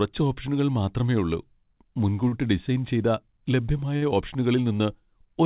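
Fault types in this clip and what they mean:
Short stall from a late packet: at 2.28 s and 3.97 s the sound hangs for 41 and 48 ms with a slight buzz or dip, then resumes intact. The jitter buffer ran dry, so the receiver stretched the last sound until the late packet arrived.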